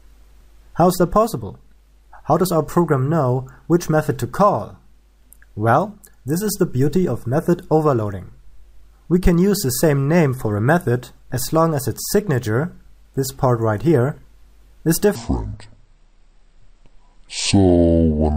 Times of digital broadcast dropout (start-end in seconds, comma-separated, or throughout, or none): none